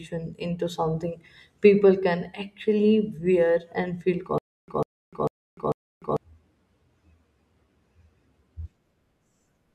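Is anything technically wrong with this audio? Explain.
Yes. From 4.38 to 6.17 s, just after "actually wear and feel", the speech breaks into a stutter with silent gaps. The likely cause is a player or stream that stalled and, on each retry, replayed its last buffered fragment before running dry. A 148 ms burst repeats four times at a steady 446 ms period, each followed by about 298 ms of dead digital silence, and the speech that belonged in that span never arrives.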